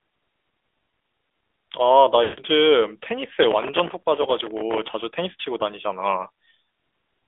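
Throughout, the speech sounds thin, buzzy and synthetic, confined to roughly 300 Hz to 3.5 kHz. This is the AMR narrowband mobile codec. Its vocal-tract model, at a rate that fits the 10.2 kbps mode, rebuilds the voice from sparse pulses and discards everything above the phone band.

From 2.24 to 2.40 s the sound smears into a drawn-out, fading warble and then returns rough. These are lost AMR speech frames. For 140 ms, about seven 20 ms frames, the decoder repeated its last good settings with falling gain.

From 3.43 to 4.94 s a gritty, tearing crackle rides on the sound. This is processor overload crackle. Dozens of buffers of a few milliseconds each missed their deadlines, and each miss replayed a hard-edged scrap of old audio.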